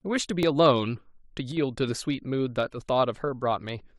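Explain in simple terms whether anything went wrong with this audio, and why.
Two faults can be heard in this speech clip.

At 0.43 s there is a tiny skip, caused by an overlap between stream segments. Two pieces of the stream were stamped as covering the same moment, so the player discarded what it took for a repeat. That sound was not really doubled, so a sliver under 20 ms went missing and the waveform jumped.

From 1.52 to 1.57 s the sound briefly drops in loudness, then returns. The likely cause is that one channel drops out. With one side of the stereo signal gone for that moment, the sound shared by both sides plays at half strength.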